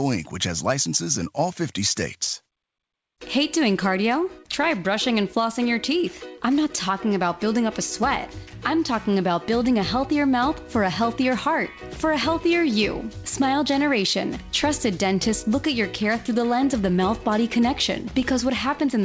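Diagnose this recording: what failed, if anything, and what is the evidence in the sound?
Nothing failed in this recording.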